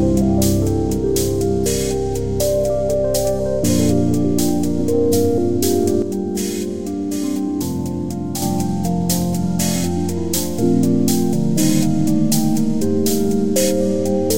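One channel likely drops out of the stereo path from 6.02 to 8.42 s, so only the remaining side feeds the mono sum. For those 2.4 seconds the sound falls abruptly by about 6 dB, then returns to its earlier level.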